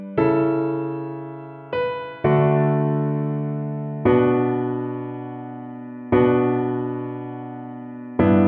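Nothing in this recording trips any alarm; there's no fault to point to anywhere along it.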